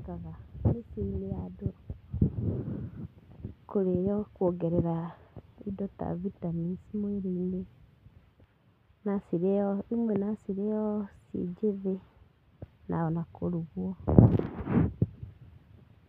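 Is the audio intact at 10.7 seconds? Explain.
Yes, the speech at 10.7 s plays through cleanly, with no dropout, click, distortion or other fault at that moment.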